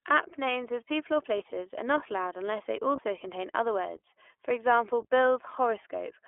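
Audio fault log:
throughout iLBC codec: speech confined to roughly 300 Hz to 3.4 kHz, with rough, slightly synthetic texture from frame-by-frame excitation coding, consistent with the 20 ms, 15.2 kbps mode.
1.38–1.41 s and 2.96–3.00 s lost iLBC frames: each 20 ms gap is filled with a brief buzzy, held-vowel repeat of the last pitch cycle. Unlike predictive codecs, the voice recovers cleanly at once because frames stand alone.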